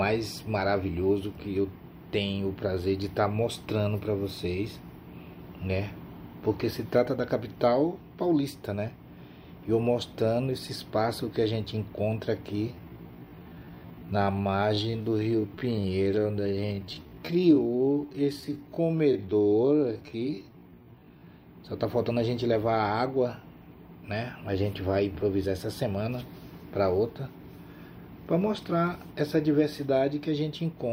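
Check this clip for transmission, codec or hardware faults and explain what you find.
One fault stands out. From 12.67 to 21.27 s the sound abruptly slows to about 0.62 times its pace, dragging, pitch unchanged: a time-stretched section, likely software repeating short pieces to lengthen it.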